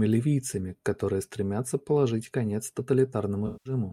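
A speech recording in which, from 3.46 to 3.73 s, the sound smears into a washy, phasey blur before clearing, an instance of AAC frame loss with concealment, where the decoder rebuilt roughly 192 ms of missing data from the last good spectrum.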